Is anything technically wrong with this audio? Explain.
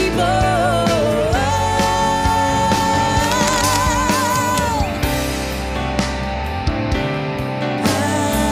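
Yes. From 3.24 to 3.77 s there is cable scratch noise: a dense, uneven crackle and rustle sitting over the sound, roughly 10 dB below it. The likely cause is a worn cable, connector or control being moved, so its contact resistance jumps about rapidly and injects bursts of noise. On a waveform this appears as ragged, spiky fuzz riding on the signal; a spectrogram shows irregular broadband vertical streaks across that half-second.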